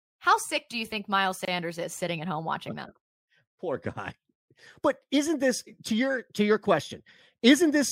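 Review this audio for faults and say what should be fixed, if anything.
At 1.45 s the speech drops into a gap of about 26 ms, ending at 1.48 s just before "is sitting at home", then resumes where it stopped. This is a gap at a join of encoded pieces. Separately encoded segments, consistent with 6-second chunks, were concatenated without removing each encoder's start-up delay and final-frame padding, leaving a hole with smeared edges. To prevent it, trim encoder delay and padding before joining, or encode the audio as one continuous stream.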